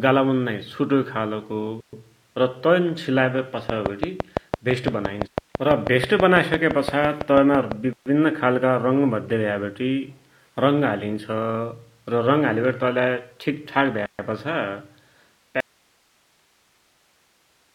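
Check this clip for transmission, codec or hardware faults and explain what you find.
Three kinds of fault are audible.

From 3.70 to 7.73 s, just after "र तन सिलाइवटी", a train of clicks ticks evenly about six times a second, around thirty in all, standing well above the speech. Likely cause: electrical interference or a faulty connection or power supply injecting pulses.

A gap at a join of encoded pieces opens as a 130 ms silence at 7.93 s, before "खालका रङ भद्याभ्यावटी", and again at 14.06 s, after "ठिकठाक भ्या". Separately encoded 6-second segments were joined with their encoder delay and end padding left in.

An audio dropout to a faint residue starts at 15.60 s. The speech cuts off abruptly and only faint hiss, far below the speech level, remains through the end. The signal was likely lost while the downstream path stayed live.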